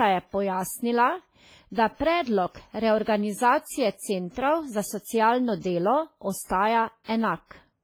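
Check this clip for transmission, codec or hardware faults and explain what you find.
Two codec faults are audible in this speech clip: heavy lossy-coding damage throughout, and two pre-echoes near the end.

Throughout, the speech sounds washy and ringing, with hiss that swells and fades with the signal and weak detail dropped out. This is likely WMA compression. Its long transform blocks smear quantisation noise over tens of milliseconds, and the damage fits a low bitrate of around 24 kbps.

Pre-echo occurs from 7.04 to 7.09 s and from 7.47 to 7.51 s. A brief hiss runs ahead of each sharp onset, lasting 47 ms and then 42 ms, and the attacks sound softened. The codec spreads noise across a whole block, so noise sized for the loud onset also fills the quiet gap before it.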